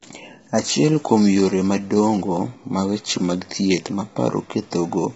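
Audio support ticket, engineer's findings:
Speech rough and grainy throughout, noise filling gaps between harmonics. Top band missing, nothing above 7.7 kHz. Likely low-delay AAC compression (AAC-ELD): short frames resolve harmonics poorly, and heavy damage at this level fits a bitrate around 16 kbps.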